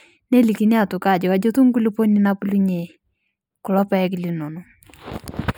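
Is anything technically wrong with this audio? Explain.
Yes, throughout the speech there is channel delay (comb filtering). One channel trails by roughly four samples, which cancels the highs near 7 kHz. The result sounds thin and phasey, with a fixed dark notch band on the spectrogram.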